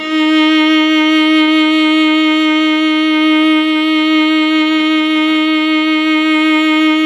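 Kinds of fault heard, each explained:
Repeated stalls (stutter): From 0.87 to 3.05 s the music keeps catching for an instant, about twenty tiny hiccups, none longer than roughly 19 ms. Packets were arriving late or too slowly, so the jitter buffer kept running dry. Each time, the receiver extended the last bit of sound to bridge the wait. Around 206 ms in all is stretched this way, about 9% of that span, so nothing is lost but the flow drags unevenly.
Jitter buffer slow-down: From 2.89 to 4.38 s the music runs at about 91% of its normal speed while the pitch stays put. The buffer was low, so the receiver built up a reserve by repeating single pitch periods and bits of pauses many times over, adding about 138 ms. Sustained sounds come out drawn-out and the tempo sags through this stretch.
Jitter buffer speed-up: From 6.34 to 7.03 s the music pushes ahead at about 107% of normal speed with unchanged pitch. 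The buffer was holding more audio than it targets, so the receiver trimmed away short pieces of one or a few pitch periods in quick succession, roughly 50 ms in total. The result sounds hurried, and the beat loses its steady footing near the end.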